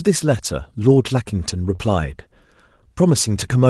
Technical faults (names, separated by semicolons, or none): short concealed packet loss